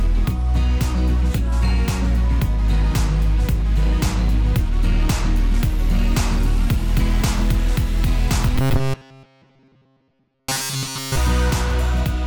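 Robotic sound from repeated short buffers runs from 8.56 to 11.17 s: the audio turns into a rigid, metallic buzz at about 133 Hz. The likely cause is fresh audio arriving too seldom, so a roughly 7.5 ms slice keeps repeating, replacing most of the sound.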